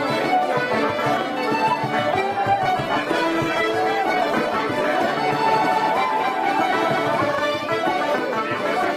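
The audio has two separate faults. From 2.49 s to 5.09 s there is a call bitrate drop. The call's bandwidth estimate fell, so the encoder was told to spend far fewer bits, going from 128 kbps down to 15 kbps. It sat at that low rate for about 2.5 s. At 15 kbps Opus codes coarsely and trims the high frequencies, so the sound turns rough and muffled. It clears at 5.09 s, when the bitrate recovers. Then, from 5.35 s to 7.35 s, there is a doubled audio track. A second full-band copy of the same audio runs behind the original by about a fifth of a second, at roughly 5 dB below it. It has no decay or room colour of its own. It appears and disappears abruptly at those two times. The likely cause is the sound being captured a second time through a slower path, or an edit that holds two copies out of step.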